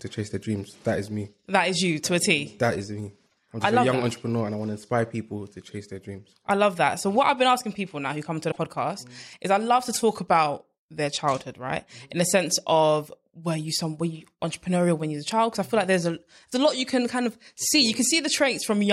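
Speech with two brief garbled skips, at 3.25–3.33 s after "is me" and 8.50–8.58 s after "now who come to", likely a broken MP3 bit reservoir from dropped frames.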